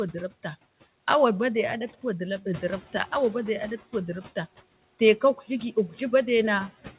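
Noise suppressor artifacts run through the whole clip: background noise drops by about 15 dB between phrases and swells under speech, leaving a residue that shows on a spectrogram as patchy, flickering noise cells, with nothing above 4 kHz from the narrowband call path. From 2.54 to 3.78 s, the noise suppressor is catching up after the room noise jumps about 10 dB around 2.5 s. For 1.24 s it removes only about 9 dB, so a brighter noise band appears on the spectrogram before gradually darkening.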